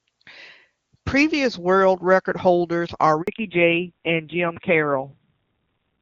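At 3.22 s a handover gap: the call switches networks, no speech frames arrive, and the sound cuts out for 60 ms until 3.28 s.

From 3.28 s on, a fallback to narrowband replaces the clear HD Voice codec. Nothing above 4 kHz survives, so the sound turns dull and rough, pointing to roughly 5.9 kbit/s.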